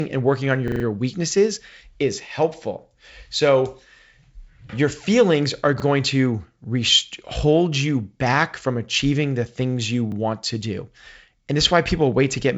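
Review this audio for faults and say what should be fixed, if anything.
Repeated buffer at 0.68–0.84 s (after "and working on") and once each at 5.8 s (after "your feelings are") and 10.12 s (after "achieving the things you"). A 40 ms piece replays with hard joins, four extra times in the first event, heard as stutters. Underruns of this kind are prevented by enlarging the playback buffer or raising the audio thread's scheduling priority.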